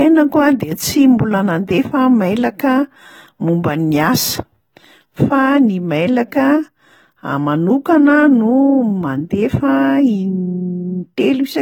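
Throughout the clip, the speech shows plainly audible AAC compression damage: a dull, smeared sound with warbling, fizzy texture on sibilants and held sounds, and nothing above 19.3 kHz. The likely cause is AAC-LC coding at a rate around 24 kbps, too coarse to fill the spectrum cleanly.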